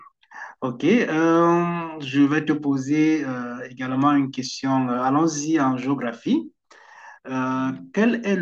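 From about 0.13 s right through to 8.39 s there's a steady run of clock slip clicks, tiny ticks coming roughly every 70 ms, around a hundred in all, close enough to blur into a faint rattle under the speech. The likely cause is two devices free-running on separate clocks that disagree by a few hundred parts per million, so a single sample gets dropped or repeated each time the drift adds up to one whole sample.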